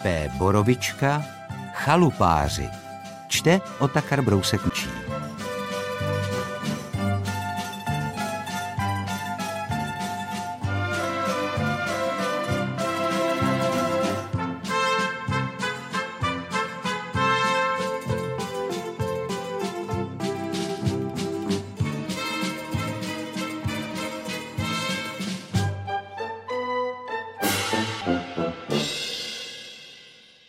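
CD skips at 4.70 s and 28.01 s: the pickup laser jumped to a different turn of the disc's spiral, so the player muted for a few milliseconds and resumed elsewhere, heard as a brief tick followed by an abrupt jump in the sound.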